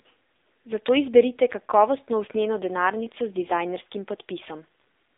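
Throughout the speech, the audio carries the sound of the AMR narrowband mobile codec. The band is confined to roughly 300 Hz to 3.7 kHz, with nothing above 3.7 kHz, so sibilants and upper harmonics are gone and low fundamentals are thinned. Codec damage is plainly audible as a buzzy, synthetic texture, which fits a low AMR-NB mode near 7.4 kbps, where a vocal-tract model excited by sparse pulses stands in for the original waveform.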